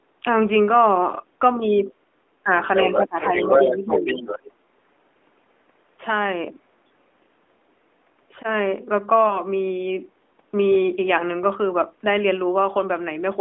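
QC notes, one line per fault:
1.58–1.62 s, 1.78–1.91 s, 2.43–2.50 s, 2.97–3.52 s and 3.71–4.06 s: speech suppressed in double talk. The talker dips by roughly 5 to 20 dB, deepest near 3 s. The likely cause is the echo canceller turning down both sides while they overlap.
1.87–1.92 s and 2.65–4.52 s: other side's voice leaking through. First a faint scrap at about -25 dB, then a long stretch only about 5 dB below the talker, likely loudspeaker echo left in the microphone signal.
9.28–9.41 s: lost AMR speech frame. A brief dip or warble as a 20 ms frame fails its checksum and the decoder reuses the last good pitch and vocal tract settings at falling gain.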